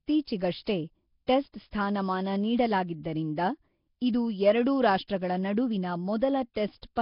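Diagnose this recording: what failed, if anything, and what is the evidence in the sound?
The failure is at the codec stage, most likely Nellymoser compression. Throughout the clip the speech has heavy codec damage: a rough, noisy haze with nothing above 5.3 kHz, which fits a low bitrate around 22 kbps. Fixed coarse quantisation starves weak bands, which are then filled with substituted noise.

Pre-echo, also a codec fault, occurs at 0.64 to 0.67 s (spread 26 ms), at 1.27 s (16 ms) and at 5.08 s (17 ms). Each attack is preceded by a short hiss and sounds smeared, because quantisation noise spread across the whole transform block spills into the quiet stretch before the onset.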